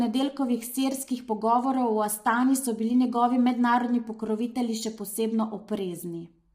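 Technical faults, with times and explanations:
Throughout, low-delay AAC compression: the speech sounds heavily rough and grainy, likely from AAC-ELD at a rate consistent with about 24 kbps. At so low a bitrate its coarse coding leaves noise between pitch harmonics, so a spectrogram shows noise filling gaps between harmonic lines and a patchy, smeared top band.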